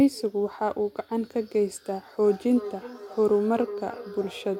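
From 2.27 s to the end, feedback echo between two devices loops the speech back roughly every 0.4 s, up to about 13 dB below it.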